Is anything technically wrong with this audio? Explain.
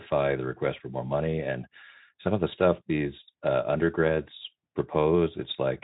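No, nothing in this speech is technically wrong. It carries the light, slightly coarse texture of Speex coding, which fits a rate of around 15 kbps.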